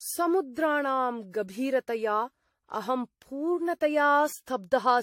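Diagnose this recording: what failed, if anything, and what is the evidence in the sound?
Generation loss throughout the speech, at the codec stage: the sound is swirly, smeared and hollow, consonant attacks blur, and nothing survives above 16.6 kHz. This likely comes from around seven AAC-LC re-encodes near 64 to 80 kbit/s, each requantising on a shifted frame grid.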